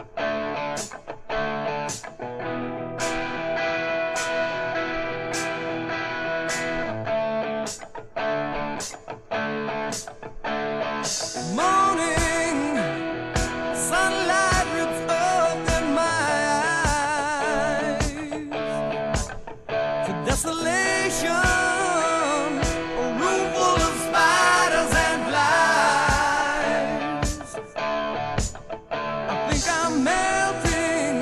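No technical faults are audible anywhere in the recording.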